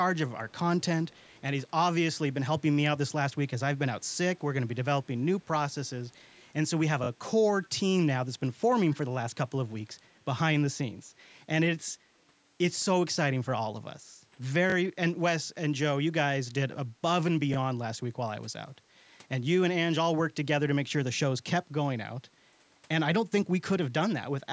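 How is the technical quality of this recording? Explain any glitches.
The recording has two kinds of glitch: faint echo early on and two short stutters later. The audio tops out around 8 kHz, consistent with call microphone processing.

Echo leak, at 0.49 to 0.54 s, 1.08 to 1.41 s and 7.63 to 7.69 s: a delayed copy of the speech returns about 260 ms late, very faint, roughly 30 to 35 dB down. This is likely a far-end loudspeaker echo that the canceller failed to fully suppress.

Repeated buffer, at 14.70 to 14.74 s and 17.54 to 17.56 s: a 20 ms slice plays three times at the first point and twice at the second, with hard joins heard as a brief buzzy stutter. The playback device reused its last block when fresh audio arrived late, which fits a 20 ms buffer.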